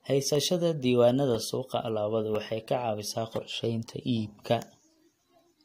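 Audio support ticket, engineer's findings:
Regular ticks in the speech, once a second from 0.35 s to 5.36 s. Periodic USB or driver dropouts: roughly a millisecond silenced each time.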